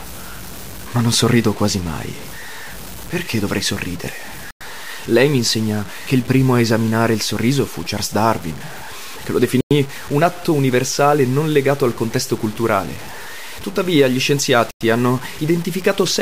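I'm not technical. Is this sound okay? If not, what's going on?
No. Throughout the speech there is a grainy, gritty roughness. This is low bit depth without dither. The likely cause is audio stored with very few levels per sample, around six bits' worth, and cut down without the small added noise that normally smooths the rounding.

There are also three gaps between chunks, each a tenth of a second of silence. They fall at 4.51 s, right after "dovrei sorridere", at 9.61 s, between "che lo" and "un atto universale non", and at 14.71 s. They repeat every five seconds, which points to audio delivered in five-second pieces with a short hole left at each join.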